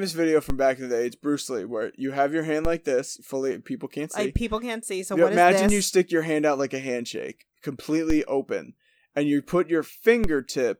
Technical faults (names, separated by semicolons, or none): DC step